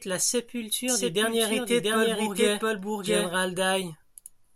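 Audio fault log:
0.88–3.3 s doubled audio track: a slower second capture path likely mixes the speech in twice, so a dry copy at about equal level trails roughly 0.7 s behind.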